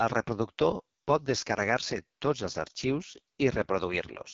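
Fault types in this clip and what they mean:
AMR wideband (HD Voice) codec: throughout, the speech sounds rough and raspy, typical of the lowest 6.6 kbit/s rate, with nothing above about 7.7 kHz.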